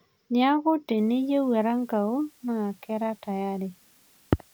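From 0.97 s, low bit depth with dither cuts the speech to 9 bits, and rounding error becomes a constant, even hiss roughly 35 dB down.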